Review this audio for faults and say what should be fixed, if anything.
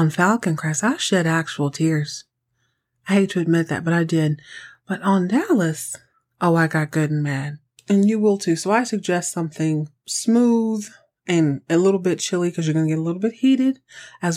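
No faults can be heard anywhere in the speech. Nothing needs to be fixed.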